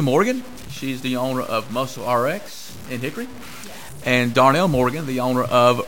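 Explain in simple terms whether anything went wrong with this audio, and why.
Something did go wrong, and it lasts the whole clip, from 0 s to the end at about 6 s. The speech carries a grainy, rough distortion that rises and falls with the speaker rather than sitting underneath as a steady hiss. Quiet stretches and the tails of sounds turn gritty or sputter. This is most likely low bit depth without dither: the audio was stored with too few steps of loudness, which sounds like around 6 bits, and cut down without any smoothing noise, so each rounding error follows the sound itself.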